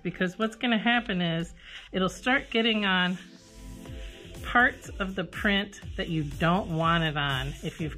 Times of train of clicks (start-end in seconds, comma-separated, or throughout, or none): none